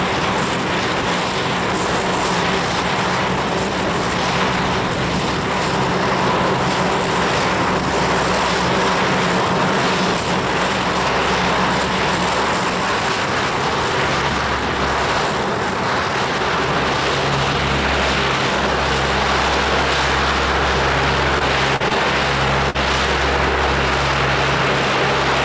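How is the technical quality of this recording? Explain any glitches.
The recording shows a cluster of short concealed packet loss events late in the clip, heard against a call-codec sound with nothing above 8 kHz, which fits G.722 at 64 kbps.

The events fall at 21.39–21.42 s, 21.76–21.83 s, 21.88–21.92 s and 22.70–22.76 s, with roughly 20, 40, 20 and 40 ms of audio missing. The receiver extended the preceding sound to bridge each gap, then blended back, producing brief smears or wobbles. Unlike a plain dropout, nothing goes silent; the holes are filled.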